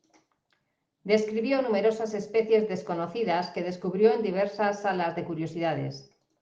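Nothing in the recording stands out as a technical fault; the speech simply runs its course with no dropouts, glitches or other trouble along the way.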